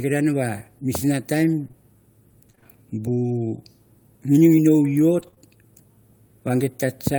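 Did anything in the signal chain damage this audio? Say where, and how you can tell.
Yes. Repeated packet loss (robotic sound), 1.63 to 2.67 s: a network fault. Six gaps, the longest 26 ms, were patched by extending the last sound, giving choppy, robotic speech.

Lost packet rebuilt from error correction, 5.19 to 5.40 s: network loss, recovered in the codec. Three packets, 60 ms in total, were decoded from low-bitrate copies, so that stretch sounds rougher and noisier.

Short concealed packet loss, 5.31 to 5.34 s and 5.34 to 5.38 s: two back-to-back network dropouts. The decoder filled 14 ms and 20 ms by extrapolation, heard as a brief smear.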